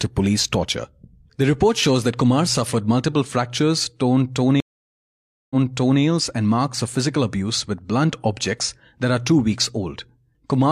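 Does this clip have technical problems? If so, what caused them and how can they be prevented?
Yes, there is a stream reconnect between 4.60 and 6.01 s. The network connection dropped just after "suffered multiple fractures torn", so the player stopped, reconnected and started a new decoder partway through the stream. The listener hears about 0.9 s of silence, then the speech picks up again 0.51 s earlier than where it broke off, because the server resent a short burst. Part of the sentence is therefore repeated before "and marks of physical". Adding a larger playback buffer, together with resuming by byte or timestamp offset on reconnect, would prevent both the gap and the repeat.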